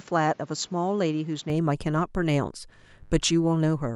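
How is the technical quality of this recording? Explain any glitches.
The recording has two clear faults. From 0.0 to 1.5 s the speech sounds dull and quieter, with no gap at the change. It likely comes from the input switching to a poorer device, which cuts everything above 7.6 kHz and adds faint noise. From 2.68 to 3.95 s a steady, raspy mains buzz sits well under the speech. It comes from switching spikes twice in every 50 Hz mains cycle, whose harmonics reach several kilohertz.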